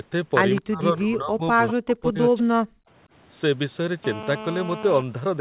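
Speech, band-limited to 4 kHz as on a narrowband call, carries brief faint repeats of itself at 0.55–0.59 s, 1.68–1.73 s and 2.38–2.43 s. They lag by 208 ms, 191 ms and 191 ms and sit roughly 15 to 20 dB below the voice. On a spectrogram they appear as weak, smeared copies of earlier harmonics, most likely echo leak from a loudspeaker at the far end. The voice also sinks sharply at 0.59–1.58 s, 1.75–2.18 s and 2.35–2.56 s, by roughly 30 to 40 dB at worst. These show as gouged notches in the waveform envelope and blanked patches in the spectrogram, likely speech suppressed in double talk. At 2.84–2.89 s the background is gated by the echo canceller: the room noise drops about 25 dB for some 50 ms, leaving a narrow dark vertical band across the spectrogram's noise floor.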